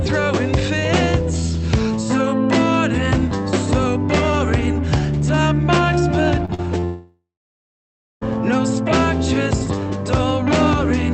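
At 6.45 to 6.50 s, 6.54 to 6.60 s and 6.80 to 6.84 s, short concealed packet loss leaves brief smears or wobbles where the receiver patched 20 to 40 ms gaps by extending the preceding sound. From 6.84 to 8.23 s a long network dropout follows, likely from an interrupted network link. The last sound continues as a fading buzz or hiss, then nearly a second of silence, before audio resumes with that stretch missing.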